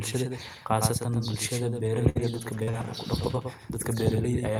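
Doubled audio track, running through the whole clip: a second full-band copy of the speech sits roughly a tenth of a second behind the original, about 5 dB quieter. It is likely caused by the same signal being captured twice, once through a slower path. Because the copy has no decay or room colour, it sounds like a crisp, flat slapback trailing every syllable rather than a natural echo.

Repeated packet loss (robotic sound), from 1.75 s to 2.87 s: the stream dropped out three times in quick succession, the longest hole lasting 59 ms. Each gap was bridged by stretching the last bit of sound forward, with 116 ms filled in this way and 120 ms lost outright. Roughly a fifth of a second of audio ends up rebuilt, so this stretch turns choppy, with fragments audibly missing.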